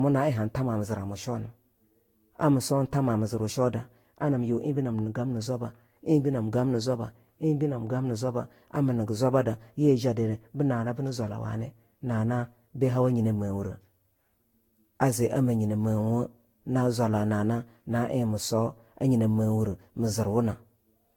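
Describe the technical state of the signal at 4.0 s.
At 4.0 s the speech carries generation loss, present across the whole clip. It sounds swirly, hollow and smeared, with blurred attacks and nothing above 19.3 kHz. The likely cause is around seven lossy passes, fitting Vorbis near 70 kbit/s, each adding fresh quantisation noise.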